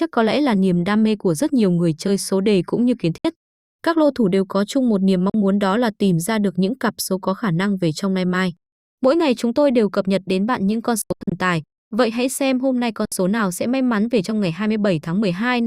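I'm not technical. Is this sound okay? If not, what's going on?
No. The speech briefly cuts to silence four times: at 3.18 s after "đề cũng như kiến", at 5.30 s, in several quick gaps from 11.02 to 11.32 s after "đến bạn những con", and at 13.05 s after "hãy xem hôm nay". Each time it resumes slightly further on. This is likely a Bluetooth dropout, where sound sent wirelessly to headphones arrived too late and was skipped.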